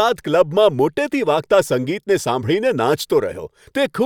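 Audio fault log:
No faults heard in this recording.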